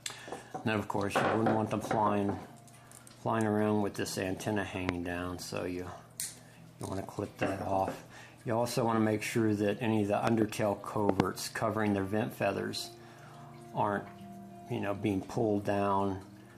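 A sharp loud pop jumps out at 4.89–4.91 s, followed by double pops at 10.27–10.44 s and 11.09–11.22 s, each roughly 20 to 25 dB above the sound. They are likely voltage spikes from a plug, switch or static discharge.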